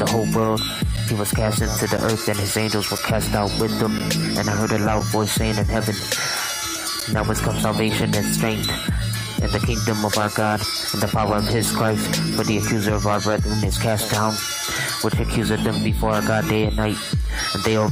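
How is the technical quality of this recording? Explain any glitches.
The main problem is a run of short dropouts, a gap between stream segments, at 0.96, 1.97, 2.98, 3.99, 5.00, 7.00 and 8.01 s. They land roughly once a second, in step with 1-second segments whose timestamps don't quite join. The player pads each gap with silence, so you hear a hard-edged hole of about 4 to 12 ms. Nothing's actually missing from the audio; the silence just gets inserted.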